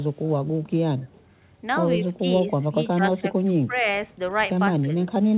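From 0.14 to 0.23 s there is an echo leak. A very faint copy of the speech returns about 160 ms late. The far side's echo canceller likely left part of its loudspeaker pickup in the signal, which was then sent back.

Speech suppressed in double talk follows at 2.14 to 2.28 s, 2.56 to 2.77 s, 2.96 to 3.36 s, 3.54 to 3.85 s and 4.82 to 4.9 s. The speech dips by roughly 10 to 20 dB, deepest in the first. An echo canceller likely mistook it for echo while both sides talked. The narrow band, with nothing above 4 kHz, fits the G.711 call path.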